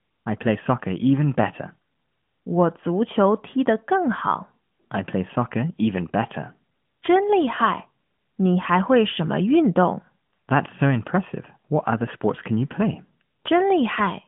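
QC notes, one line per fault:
No faults logged; the narrowband AMR-NB mobile codec path, with nothing above about 3.6 kHz and light coding texture, is the expected channel character.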